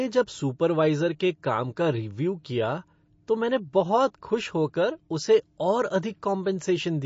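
Throughout, the speech carries plainly audible MP3 compression: nothing above 7.5 kHz, with watery, swirling detail on sibilants, likely from a bitrate around 32 kbps.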